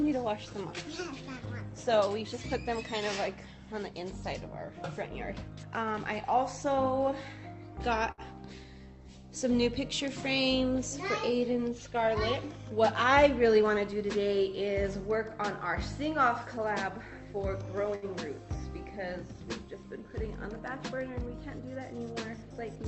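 Around 8.11 to 8.21 s there's a short stall from a late packet: the jitter buffer ran dry, so the receiver held the last bit of sound for about 66 ms until the packet showed up, then carried on where it left off. Nothing's lost, but you hear a brief smeared hold with a faint buzz or dip.

From 13.11 to 14.04 s the jitter buffer speed-up kicks in. The receiver had too much audio queued, so it snipped out tiny pitch-period chunks, roughly 70 ms in total, and the playback runs about 7% fast. The pitch stays put, but that stretch feels a little rushed.

At 17.95 to 18.05 s there's another late-packet stall, same deal as the first: about 70 ms of held sound while the buffer waited, then it resumes with nothing missing. Through all of it, the top end tops out around 8 kHz, as you'd expect from the call codec.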